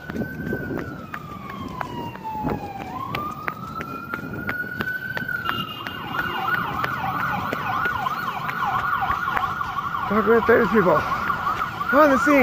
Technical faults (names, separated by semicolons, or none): none